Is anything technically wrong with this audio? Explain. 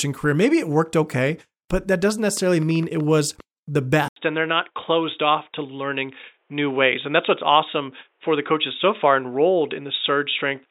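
Yes. From 2.29 to 3.41 s, just after "okay but that doesn't", a train of clicks ticks over the speech. About seven clicks arrive irregularly, roughly 6.3 per second. They are as loud as the speech itself. Likely interference or a faulty connection.

At 4.08 s the input switches to a poorer device after about 80 ms of silence. The likely cause is a headset or lesser microphone taking over. Nothing passes above 3.8 kHz, so the speech turns dull to the end.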